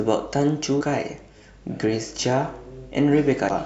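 Damaged data in a compressed stream appears at 0.77 to 0.82 s and again at 3.46 to 3.52 s. Corrupted bytes leave the decoder misreading frames and losing sync until it finds the next header, so each spot sounds like a brief chirp, squawk, click or short hole cutting into the speech.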